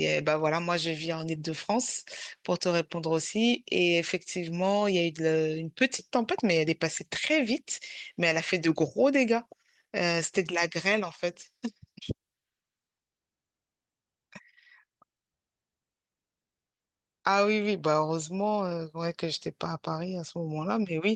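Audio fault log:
19.72 to 21.16 s, de-emphasis applied wrongly. The speech turns dull and muffled for the last stretch. A treble cut meant to reverse pre-emphasis lands on audio that never had any, or is applied twice. Highs slope smoothly downward, about 8 dB lower at 10 kHz than at 1 kHz.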